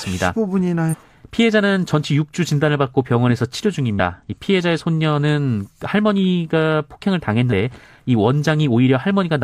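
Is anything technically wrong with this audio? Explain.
Yes. The speech contains damaged data in a compressed stream, heard twice. The first fault runs from 0.89 to 0.95 s. The second runs from 3.90 to 4.00 s. At each point, part of the encoded stream is corrupt. The decoder misreads those frames, loses its place, and must hunt for the next valid frame header before playback recovers. Each event is brief, under a tenth of a second. It comes through as a short chirp, squawk or blip.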